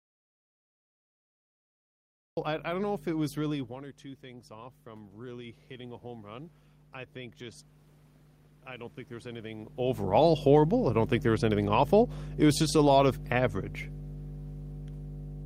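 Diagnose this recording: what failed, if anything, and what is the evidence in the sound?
Mains hum at 50 Hz runs through the whole recording, roughly as loud as the speech itself. This is an analogue wiring fault. A ground loop or a nearby transformer is coupling the power line into the microphone path before the converter. The result is a steady low tone with its low harmonics that never changes with the speech.

Audio dropout to silence is already under way when the recording begins and lasts until 2.37 s. That stretch is silent, with no room tone and no hum, while the hum appears the instant the signal returns. The hum's absence shows the input itself was gone, not merely quiet. The likely cause is a lost input at the converter or driver stage, such as a disconnected device or a mute, while the recorder kept writing silence.

Automatic gain rising occurs twice in the call processing stage. 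The first rise is from 4.21 to 6.59 s, about 5 dB, following the speaker moving away near 3.5 s, which dropped the input by about 14 dB. The second is from 8.66 to 10.35 s, about 4 dB. Each time, the speech and the room noise swell together over a second or two, with the hum rising alongside them. This is the sign of a gain stage lifting everything, rather than the speaker getting louder.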